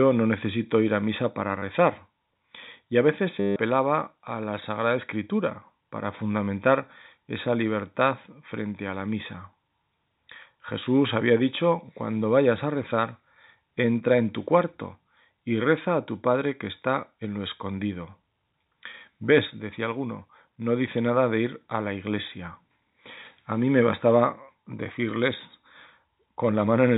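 Speech over a telephone-band link: the G.711 coding itself just gives the usual cut-off at 4 kHz. The fault is packet loss with the last packet repeated. At 1.6 s there's a quick 30 ms stutter, and from 3.40 to 3.56 s a 160 ms run where the receiver keeps replaying stale audio. The longer run buzzes at about 100 Hz, which fits 10 ms packets, so it comes out robotic.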